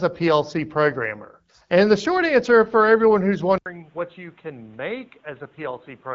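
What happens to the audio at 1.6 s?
Nothing goes wrong at 1.6 s: the speech there is intact, carried cleanly by the AMR wideband (HD Voice) codec at 12.65 kbit/s, with no dropout, glitch or added distortion at that moment.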